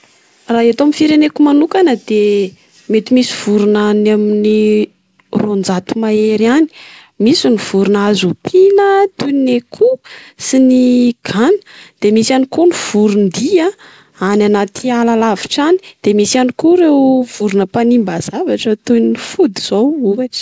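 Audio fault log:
No faults turn up in this speech, which comes over a call path using G.722 at 64 kbps, so nothing is heard above 8 kHz.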